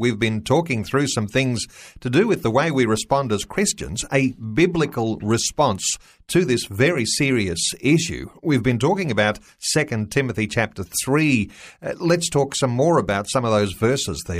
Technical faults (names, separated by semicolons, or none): pre-echo